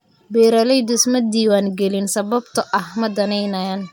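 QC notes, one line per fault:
No technical faults are audible; the signal stays steady and continuous for the whole recording.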